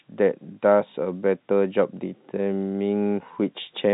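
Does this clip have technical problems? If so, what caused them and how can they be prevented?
No, nothing in this speech clip counts as a fault; it is telephone-band G.711 A-law audio at 64 kbps, with nothing above about 3.9 kHz and at most faint coding noise, which is normal for that format.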